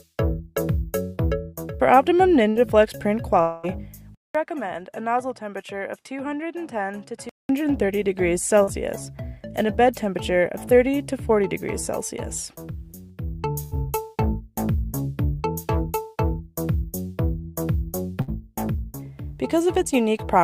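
Short concealed packet loss at 1.15 to 1.19 s: about 20 ms of audio never reached the decoder in time. The receiver filled the hole by extending the preceding sound, from its pitch or as shaped noise, and then blended back, leaving a brief smear.

Burst of packet loss at 2.49 to 2.57 s: a 60 ms run of packets was lost or arrived too late. The receiver stretched the last sound into a held buzz or a fading hiss, and playback resumed 60 ms further on.

From 3.41 to 3.65 s there is a longer gap of about 220 ms, likely a long network dropout. It is bridged entirely by a fading continuation of the previous sound, with no silence, and the audio returns with that stretch missing.

From 4.15 to 7.49 s the input was likely switched to a poorer device. A 200 ms silence marks the switch. Afterwards nothing reaches above 12 kHz, the level drops by roughly 10 dB, and a new noise floor sits roughly 50 dB below the signal. 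The sound turns duller until the original input returns.

Short concealed packet loss again at 8.63 to 8.69 s, this time about 40 ms patched over.

Further bursts of packet loss occur at 13.63 to 13.73 s, with 80 ms replaced by a decaying continuation, and at 18.21 to 18.30 s, with 60 ms.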